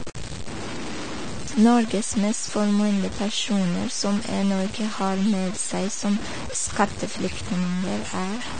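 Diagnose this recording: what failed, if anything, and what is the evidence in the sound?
The sample-format conversion stage is the likely culprit: the audio seems to have been cut down to very few bits, consistent with about 5-bit samples, by truncation with no dither. Because the rounding error tracks the waveform, the whole clip carries a grainy, gritty distortion that rises and falls with the speech, sitting only about 10 dB below the signal. Quieter syllables and decays sound roughest, breaking into coarse steps instead of fading smoothly.

The codec stage has also failed: the speech carries plainly audible low-bitrate AAC compression damage, which fits AAC-LC at around 32 kbps. Starved of bits, the encoder has dropped everything above 9 kHz, so the sound is dull throughout. Coarse quantisation of the spectral lines leaves a smeared, warbling texture on sustained sounds and a fizzy edge on sibilants, layered on top of the bit-depth grit for the whole recording.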